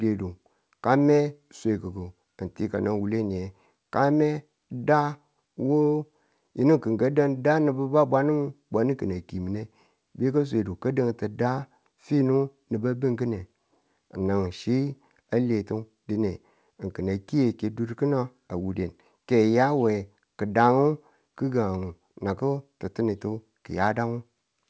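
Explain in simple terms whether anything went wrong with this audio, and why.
Nothing went wrong with this audio; it sounds just as speech normally does after passing through an ordinary internet call.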